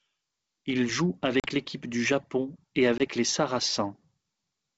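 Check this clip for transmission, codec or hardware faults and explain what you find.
Two brief gaps in the speech point to packet loss on an ADPCM call, over a G.722 link that keeps its wideband clarity. The gaps fall at 1.40–1.49 s (40 ms lost, about two packets) and 2.98–3.02 s (20 ms, about one packet). Each hard-edged silent hole leaves the decoder's predictor and step size out of step, so the speech returns slightly distorted. That mistracking recovery sets it apart from a clean dropout.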